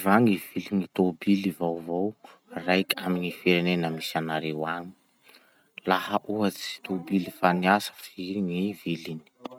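There are no technical faults to describe in this speech recording.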